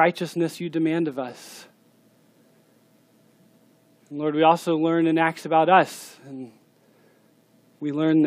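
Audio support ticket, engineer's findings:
No faults found in this clip. Nothing audible points to a problem in the capture or playback chain.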